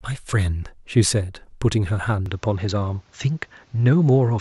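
At 2.26 s the speech turns duller for the rest of the clip, through 4.40 s. That is the signature of the input switching to a poorer device, likely a different microphone or a headset's call profile taking over mid-recording. Nothing above 7.6 kHz gets through after the change, so the top air and sibilant detail drop away. A faint new noise floor appears about 40 dB under the speech. The switch is seamless, with no gap and no noticeable jump in level.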